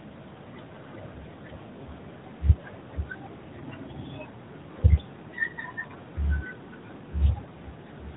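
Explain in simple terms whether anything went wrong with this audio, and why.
Nothing went wrong here.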